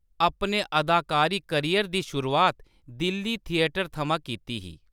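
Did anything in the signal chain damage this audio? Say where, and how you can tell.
No, nothing in the chain audibly damaged this recording.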